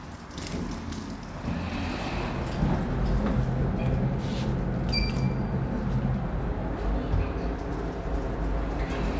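The sound arrives intact over the call path, its band stopping at 8 kHz in the way that fits a G.722 wideband codec, with nothing in the signal pointing to a technical fault.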